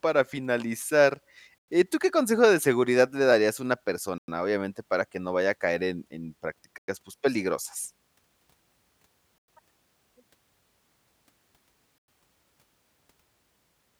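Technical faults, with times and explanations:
1.58, 4.18, 6.78, 9.38 and 11.98 s: gap between chunks. Hard-edged 100 ms silences recur every 2.6 s because each 2.5 s stretch of speech is followed by silence before the next chunk, e.g. between "a caer en en" and "pues peligrosas".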